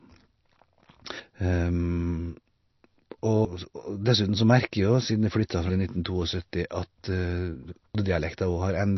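Throughout, the speech sounds watery and swirly, with nothing above 5.9 kHz. This is likely MP3 compression, which fits a very low bitrate around 32 kbps.

At 7.95 s, audio missing between chunks causes an abrupt skip. About a third of a second vanishes, likely lost at a 2.5 s chunk boundary.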